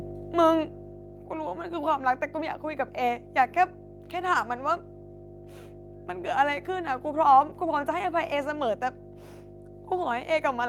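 From the very start and for the whole recording, a ground loop or a nearby transformer is letting the 50 Hz power line leak into the signal path, producing mains hum. It sits as a steady low drone at 50 Hz, with a few low harmonics stacked above it, and it is strong, only a few decibels below the speech itself, so it never recedes behind the talking and stays clearly audible through pauses as well.

Between 0.05 and 1.51 s, the automatic gain control judges the input too loud or its background noise too strong and pulls its gain down gradually, by about 8 dB over that stretch: automatic gain falling. The speech opens loud and forward, then sinks steadily over roughly a second and a half, and the background sinks along with it, which gives away that the whole signal is being turned down rather than the talker getting quieter.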